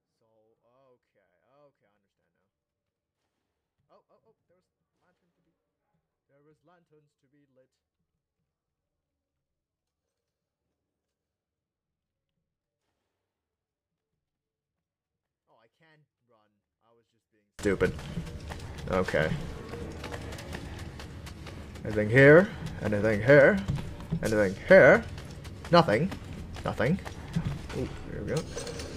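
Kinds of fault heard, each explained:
24-bit alignment error (too quiet): 24-bit samples sitting in the low bytes of 32-bit words are read as full 32-bit values, so for the first 17.6 s the sound stays clean but about 48 dB down; the waveform is a near-flat line and the spectrogram is nearly blank.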